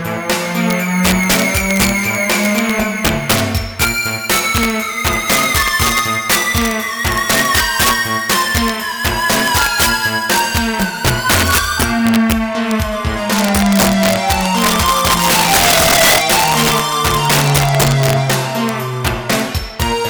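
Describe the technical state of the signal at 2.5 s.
At 2.5 s the signal shows integer overflow, present throughout: peaks driven about 7 dB past full scale wrap to the opposite sign, producing sharp, violent cracks on roughly one percent of samples.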